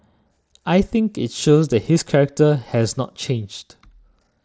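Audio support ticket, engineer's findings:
No faults found in the speech. The Bluetooth mSBC headset path is audible as a band limit near 8 kHz, with light grainy codec noise on louder passages.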